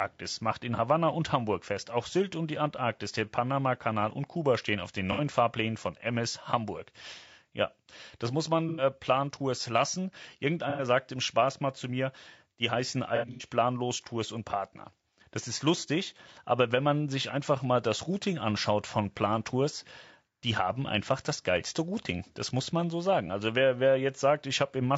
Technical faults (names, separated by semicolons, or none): low-delay AAC compression; AAC frame loss with concealment